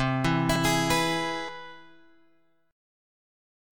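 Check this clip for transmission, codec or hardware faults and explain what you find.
Two faults, both at single instants: at 0.56 s and 1.49 s the sound jumps abruptly. This is likely a dropped buffer (overrun), where samples were overwritten before being read and the two sides were butted together. The first skips roughly a tenth of a second, the second roughly a fifth, with no gap of silence.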